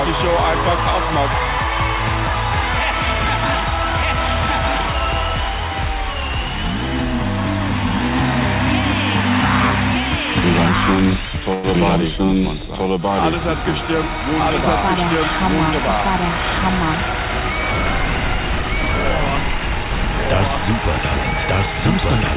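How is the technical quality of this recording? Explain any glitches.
The recording has three glitches: a constant echo-like doubling, one brief hold, and a short sped-up passage near the end. All of it comes through a narrowband call path that leaves nothing above 4 kHz.

A doubled audio track runs throughout. A second full-band copy, about as loud as the first, trails roughly a second behind, likely from a slower capture path feeding the mix.

A short stall from a late packet occurs at 11.54 to 11.66 s. The jitter buffer ran dry, so the last sound was stretched for 96 ms until the packet arrived, leaving a held moment.

A jitter buffer speed-up runs from 20.52 to 21.75 s. The receiver trimmed around 50 ms in small pitch-period pieces to cut the excess delay, so the audio plays at 103% speed without any change in pitch.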